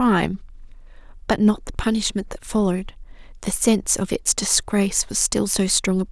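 No technical faults occur at any point in the clip, so there are none to describe in time order.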